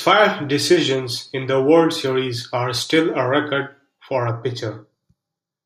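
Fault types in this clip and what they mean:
Channel delay (comb filtering): From about 4.29 s, just after "still a record for", the speech turns hollow and phasey until the end. One channel arrives a fraction of a millisecond late. When the two channels are mixed to mono, the shared sound partly cancels itself. The cancellations fall at evenly spaced frequencies, the first around 3 kHz. That notch sits in the presence range.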